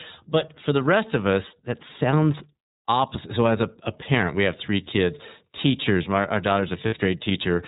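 Narrowband, slightly rough and synthetic speech runs through the whole clip, with nothing above 4 kHz and plainly audible coding damage that gives the voice a processed edge. This is the iLBC codec at work. It rebuilds each frame's excitation on its own rather than predicting from the frame before, and the sound fits its 13.33 kbps mode with 30 ms frames. Its low-band, model-based coding trades naturalness for robustness. From 6.86 to 6.94 s, just after "kids teachers my our", the speech briefly turns into a held, faintly buzzy and breathy vowel-like tone, then snaps back to normal almost immediately. These are lost iLBC frames. About 60 ms of audio went missing, which fits two dropped 30 ms packets. The decoder covered the gap by repeating the last pitch cycle mixed with noise. Because every iLBC frame decodes independently, the next frame that arrives restores the voice straight away.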